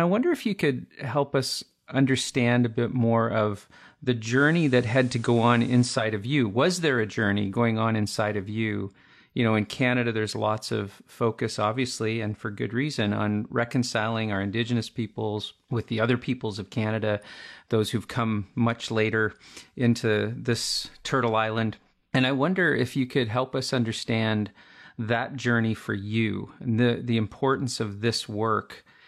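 At 4.29 s the speech blends from digital radio to analogue FM over a 139 ms cross-fade, returning at 6.06 s. The level shifts about 3 dB, hiss rises to roughly 30 dB below the signal, and the spectrogram shows a raised noise floor.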